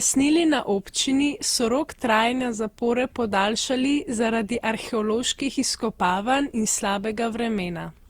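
Speech that carries generation loss for its whole length: the voice sounds swirly, smeared and hollow, with consonant attacks blurred. Unlike a single low-bitrate encode, the damage is heavier than the underlying rate would produce, which fits an Opus stream near 64 kbit/s that was likely decoded and re-encoded around seven times. Each pass re-quantises on a shifted frame grid, so noise and spectral gaps stack up rather than staying fixed.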